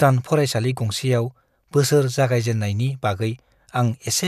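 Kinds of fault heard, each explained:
No technical faults heard.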